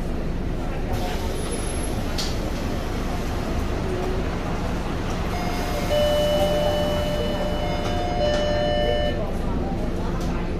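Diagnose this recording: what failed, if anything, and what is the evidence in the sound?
Nothing failed, and the sound carries no evidence of a fault at any stage.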